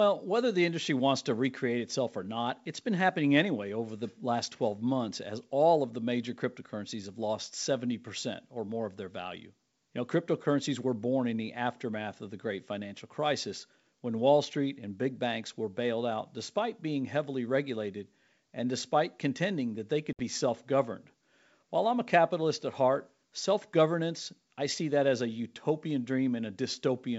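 A hard-edged silent gap at 20.13 to 20.21 s is packet loss on an ADPCM call: 60 ms of several packets, leaving the decoder's predictor and step size out of step.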